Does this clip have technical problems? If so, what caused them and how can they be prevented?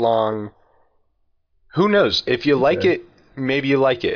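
No, no technical problems heard.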